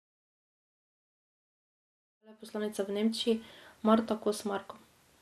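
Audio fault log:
throughout: MP2 compression, with dull, gurgling granular speech, a flat spectrogram ceiling at 13.6 kHz and flickering upper bands, likely from starved Layer II sub-bands near 80 kbps.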